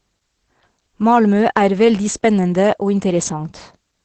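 From start to finish the speech sounds muffled, hoarse and faintly robotic, with nothing above about 8.5 kHz. That is Opus voice compression running in its SILK linear-prediction mode. The sound points to a low bitrate of around 12 kbps, at which the coder keeps only the wideband range up to 8 kHz and describes the excitation coarsely, frame by frame, in a way that fits 20 ms frames. The damage is plainly audible.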